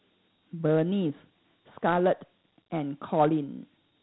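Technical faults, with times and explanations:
Throughout: Dialogic VOX ADPCM. The speech sits in a narrow phone-style band with nothing above about 3.9 kHz, which points to an 8 kHz sample rate and fits a 32 kbps 4-bit stream. That codec stores only small step-by-step differences, so its coarse step sizes keep lagging behind the waveform. The quantising error comes out as a plainly audible gritty hiss riding along with the speech, giving it a rough, grainy edge.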